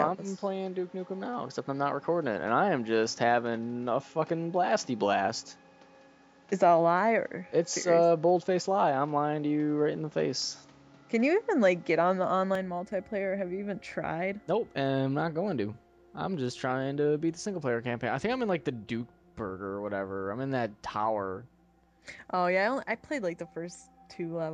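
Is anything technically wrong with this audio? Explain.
Yes. From the start to 12.55 s the sound is dull and boxy, with nothing above 7.6 kHz, a background noise sitting roughly 35 dB under the signal, and a level that differs by about 5 dB from the rest. At 12.55 s it clears abruptly with no gap. The likely cause is an input switched to a poorer device: a narrower-band microphone or headset profile with its own tone, gain and noise, after which capture returns to the fuller input.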